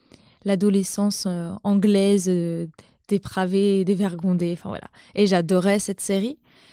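A speech clip with no technical faults to report.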